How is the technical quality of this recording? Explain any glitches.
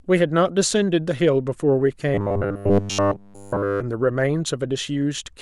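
The speech has one clear fault, robotic sound from repeated short buffers, from 2.14 to 3.80 s. Over that stretch the voice becomes a rigid, metallic 100 Hz buzz that only loosely tracks the words. The likely cause is starved playback looping about 10 ms of audio while fresh audio was skipped, with the whole stretch made of repeats.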